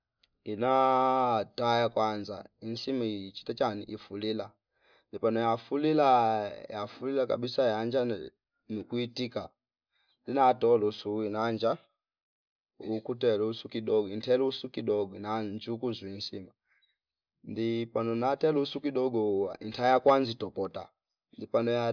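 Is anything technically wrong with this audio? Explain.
No, nothing technically wrong can be heard in this speech recording. There is no moment in it that stands out as a fault.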